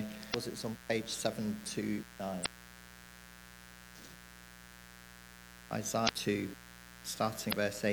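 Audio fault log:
throughout: mains buzz. A steady, raspy buzz sits under the whole clip at about 20 dB below the signal. It is built on 60 Hz and its harmonics. Sharp switching spikes from something like a dimmer, a rectifier or an unshielded line are getting into the signal twice in each 60 Hz cycle. Each spike is very short, so its energy spreads across a long series of harmonics reaching into the kilohertz range. That dense stack of harmonics is why it sounds like a rasp and not a smooth hum.
0.30–0.35 s, 2.42–2.47 s, 6.05–6.10 s, 7.49–7.53 s: damaged data in a compressed stream. Four brief glitches occur, each about 45 ms long, heard as a chirp, squawk, click or short hole. At these points part of the coded stream was wrong, whether lost, zeroed or overwritten. The decoder misread the affected frames, lost sync and jumped to the next frame header it could find. It rebuilds garbage for those frames, which gives the blips.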